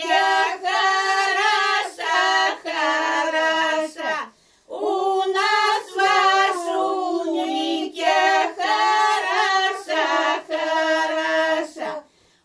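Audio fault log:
No faults are audible anywhere in the clip. Nothing in the sound calls for a timed entry.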